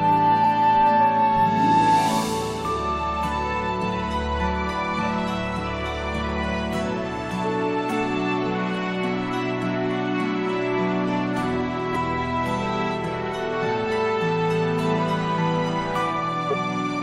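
At 11.95 s, compressed frames are skipped. About 70 ms of audio never plays, so the sound jumps forward. From 16.48 to 16.53 s, roughly 20 ms goes missing the same way.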